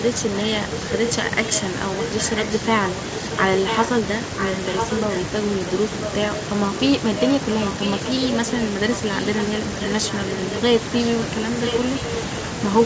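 A far-end echo canceller likely failed to remove the loudspeaker pickup, causing echo leak in this speech recording: a copy delayed by about 0.99 s sits roughly 5 dB below the speech from 0.01 to 5.2 s, then returns at about equal loudness from 11.65 to 12.01 s.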